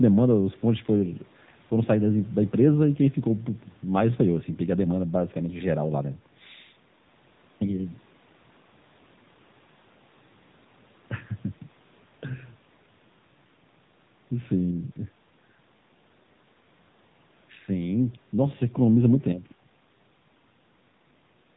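Speech squeezed through an AMR narrowband mobile codec the whole way: nothing above 3.8 kHz, plus a plainly buzzy, synthetic edge that fits a low bitrate near 8 kbps.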